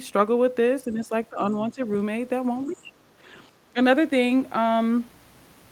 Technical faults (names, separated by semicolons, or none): speech suppressed in double talk; other side's voice leaking through